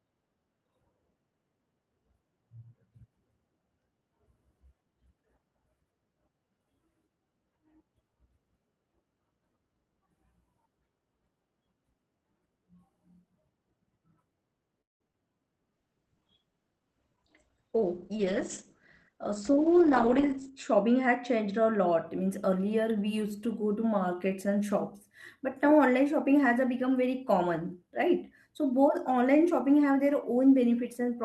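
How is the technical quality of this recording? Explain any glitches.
The recording has a cluster of call-transmission glitches in the middle, between about 14.8 and 21.4 s, heard through an Opus call path whose sound tops out around 8 kHz.

From 14.81 to 15.01 s the audio stalls for about 0.19 s, fading almost at once into near-silence lasting about 180 ms before resuming where it left off. This is a call audio freeze, likely caused by delayed packets leaving the jitter buffer empty, so a gap was inserted while nothing was lost.

Right after, at 15.08 s and again from 15.12 to 15.14 s, there are two tiny smears or wobbles. Each is a short concealed packet loss: about 10 ms of audio failed to arrive, and the receiver patched it by extending the preceding sound before blending back in.

From 15.73 to 20.54 s the sound turns rougher and more watery. This is a call bitrate drop, with the encoder pushed from 32 kbps down to 12 kbps for nearly 5 s. 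With far fewer bits available, Opus quantises much more coarsely until the rate recovers.

Overlapping this, from 19.14 to 21.40 s, leading into "a lot", the speech sounds slightly hurried, running about 6 percent fast at unchanged pitch. This is a jitter buffer speed-up: the receiver trimmed small pitch-period slices, totalling roughly a seventh of a second, to cut the excess delay.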